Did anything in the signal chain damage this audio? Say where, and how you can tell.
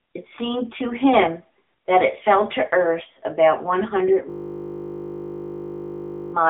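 Yes. The first fault comes from summing two channels to mono when one is late by a very short delay, around a tenth of a millisecond, which fits a few samples of offset. This is channel delay (comb filtering): content common to both channels cancels at evenly spaced frequencies, with the first notch somewhere near 5 kHz. That notch sits above what the codec later passes, so it is heard as a dull, slightly hollow top end rather than distinct notches.

The codec stage is the AMR narrowband mobile codec, AMR-NB at 7.95 kbps. The line band runs from 250 Hz to 3.6 kHz, and nothing comes through above 3.7 kHz, so the speech has the boxy, telephone-limited sound of a mobile call. The damage is plainly audible. The vocal-tract model rebuilds the voice from a handful of pulses per subframe at this bitrate, giving it a buzzy, synthetic edge throughout.

From 4.3 s to 6.34 s there is a system hang loop at the driver or buffer stage. 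The software stopped feeding new audio while the hardware kept replaying the same 20 ms of its ring buffer, 102 times in a row. Repeating that fragment at 50 Hz turns it into a steady, pitched buzz at the loop rate, with no forward movement in the speech until the loop releases at 6.34 s.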